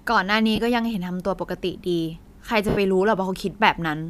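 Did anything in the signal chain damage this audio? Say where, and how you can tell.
Yes, lost LE Audio frames on the Bluetooth link. At 0.56–0.59 s and 2.69–2.77 s, the decoder reuses its last spectrum with random signs, smearing speech into noisy hiss.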